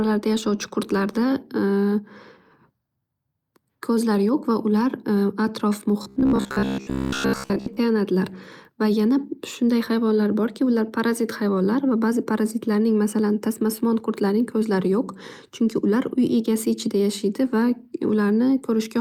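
From 6.03 to 7.80 s the speech turns into robotic sound from repeated short buffers, a rigid metallic buzz at 66.7 Hz, likely from a 15 ms buffer looping over most of the audio. It appears as evenly spaced harmonic lines on a spectrogram and identical repeating cycles in the waveform.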